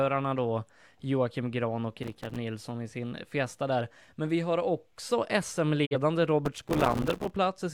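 A speech clip with two bursts of processor overload crackle, at 2.03–2.37 s just before "i sin" and at 6.46–7.36 s. The processor misses buffer deadlines of a few milliseconds, many in a row: dozens in the first burst and around a hundred in the second. Each miss drops in silence with hard edges. On a waveform these appear as rapid tiny flat gaps. A spectrogram shows dense vertical broadband streaks. A digital broadcast dropout follows "vi har också" at 5.85–5.96 s. The sound fades over about 20 ms and then mutes. This fits the receiver discarding a single bad frame of about 43 ms. The waveform narrows to a flat line, and the spectrogram shows a short blank vertical band.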